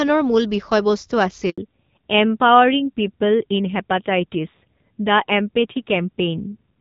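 At 1.50 s the speech drops out in a handover gap of 80 ms, lasting until 1.58 s. The call is being moved from one network link to another and no speech frames get through during the switch, so the sound fades within a few tens of milliseconds and stays silent. Unlike a burst of ordinary packet loss, there is one clean hole and no smeared or repeated fragments. The audio that resumes also sounds different from what came before.

From 1.58 s to the end, the call has fallen back to narrowband. Before the gap, the AMR wideband (HD Voice) codec at 12.65 kbit/s carries the speech with only light coding damage. After it, the call continues on AMR narrowband, which suggests a rate of 7.4 kbit/s. Nothing above 4 kHz remains, so the voice loses its airy top and sibilant detail and sounds duller and rougher. A steady lowpass filter would only dull the sound, but here the switch happens suddenly, right after the gap, and brings in the extra roughness of a lower-rate codec.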